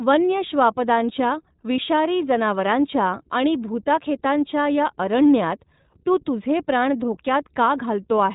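Throughout the speech, the sound is thin, boxed-in and slightly rough, with a plainly audible synthetic edge and nothing above about 3.8 kHz. This is the iLBC codec, coding each short frame independently, which fits its 15.2 kbps mode with 20 ms frames.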